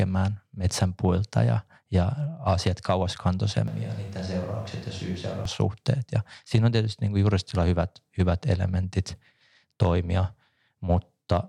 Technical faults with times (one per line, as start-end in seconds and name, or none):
3.68-5.45 switch to a distant microphone